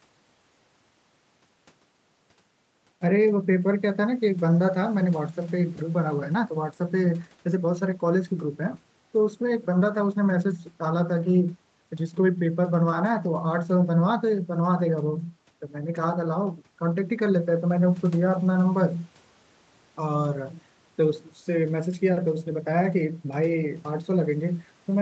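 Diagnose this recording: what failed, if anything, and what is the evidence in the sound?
Nothing failed: the speech shows only the expected call-path character, with nothing above 8 kHz from the microphone processing and the codec's bandwidth, and no fault audible at any point.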